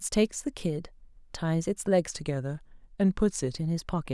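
From 2.09 s to 3.56 s the speech drops abruptly in both speed and pitch, running about 6% slow and roughly a semitone (110 cents) flat, then snaps back to normal. This is a drift correction step, likely from clock-matching software resampling in a single jump to refill its buffer. Unlike wow or flutter, the shift doesn't waver or glide. It holds steady and flips cleanly at both edges.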